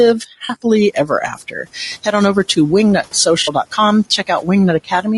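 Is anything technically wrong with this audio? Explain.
Yes, several things are wrong with this speech.

Throughout, the speech sounds rough and grainy, with noise between the harmonics and a thin, somewhat synthetic top band. This points to low-delay AAC compression, likely AAC-ELD at a low bitrate around 32 kbps, whose short frames resolve pitch harmonics poorly.

At 0.45–0.51 s and again at 3.43–3.49 s there is a brief smeared, noisy patch of about 40 ms each time, which fits two lost frames. This is AAC frame loss with concealment: the decoder filled each gap by reusing the last good spectrum.

Between 1.35 and 1.66 s, and between 4.27 and 4.48 s, parts of the speech sound swallowed and faint, dropping by about 11 dB and about 9 dB. The affected portions total roughly 150 ms and 100 ms. This is speech cut by the noise suppressor, which mistook those portions for background and turned them down. 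The room noise, which rises by about 11 dB near 1 s but stays about 30 dB below the speech, is part of the recording rather than a fault.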